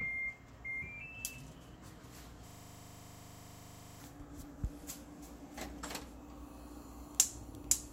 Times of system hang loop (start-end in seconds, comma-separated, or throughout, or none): 2.48-4.00